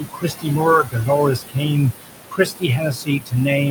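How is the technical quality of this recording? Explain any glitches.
The recording has audible processing problems from an aggressive noise suppressor.

Noise suppressor artifacts run throughout. The suppressor pulls steady background down by about 19 dB per frequency band. The room noise sits about 9 dB below the speech.

Speech cut by the noise suppressor happens from 0.00 to 0.61 s, 0.83 to 1.78 s, and 2.00 s to the end. The suppressor mistakes quieter speech for noise. It drops it by up to about 18, 20 and 22 dB. Soft sounds and word endings come out swallowed and faint.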